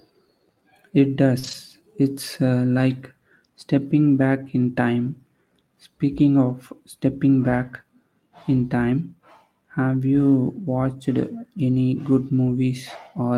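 Right at the start, from 1.39 to 1.45 s, there's a short concealed packet loss: roughly 40 ms of the stream never arrived in time, so the decoder improvised about 38 ms by stretching out the preceding sound and then cross-fading back into real audio. You hear it as a quick smear or wobble rather than a gap.

Overlapping that, from 1.43 to 1.53 s, comes the first lost packet rebuilt from error correction. About 60 ms here was played from the low-bitrate backup copies tucked into the following packets, which points to three separate packets going missing. There's no dropout, just a patch that sounds grainier and noisier than its surroundings.

The same thing happens at 4.43 to 4.49 s, right after "uh like stepping" and before "in time", this time a rougher 40 ms stretch. The last one is a single brief frame at 6.49 to 6.51 s, just ahead of "stepping back". It's only about 20 ms of coarse, hissy texture.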